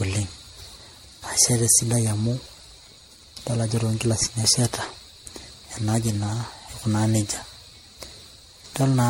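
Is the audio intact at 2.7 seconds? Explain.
No. Generation loss runs through the whole clip, including 2.7 seconds. The speech sounds like it was likely encoded and decoded around seven times with MP3, at what fits a low rate near 64 kbit/s. Each pass quantised on a shifted frame grid, so noise and spectral holes stacked up. The result is swirly, smeared and hollow, consonant attacks blur, and nothing is left above 16.5 kHz.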